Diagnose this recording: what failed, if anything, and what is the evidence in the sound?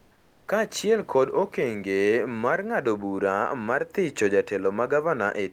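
Codec stage: from 0 to 0.43 s, comfort noise replaces the background. Likely Opus DTX, synthesising shaped noise about 2 dB quieter that shows as a smooth, featureless spectrogram band.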